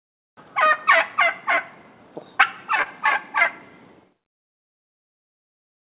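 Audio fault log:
2.82 to 2.87 s, short concealed packet loss: about 40 ms of audio went missing, and the receiver filled roughly 34 ms by extending the preceding sound. The result is a brief smear before the real signal resumes.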